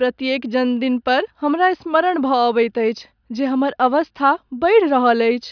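Nothing goes wrong anywhere along the way here, so there's no fault to point to at any moment in the recording.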